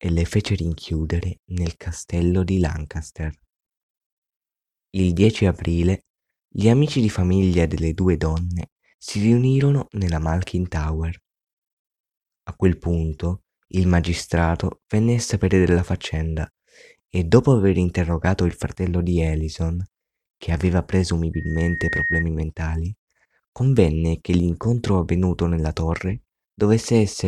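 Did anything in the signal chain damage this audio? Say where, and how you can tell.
Yes. From 21.33 to 22.25 s, just after "che aveva", a single 1.9 kHz tone swells over roughly 0.7 s to about the level of the speech, then stops before "mentali convenne che l'incontro". This is loudspeaker feedback squeal in the acoustic path: the microphone picked up its own loudspeaker, and loop gain above one at 1.9 kHz made that tone grow on its own.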